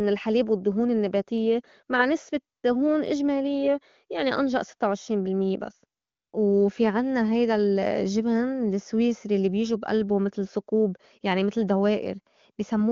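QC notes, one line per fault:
2.57–2.63 s and 6.01–6.33 s, AMR comfort noise: after "نسبة" and after "بس", speech frames stop for 60 ms and 320 ms. The receiver fills each gap with smooth synthetic noise that switches in and out.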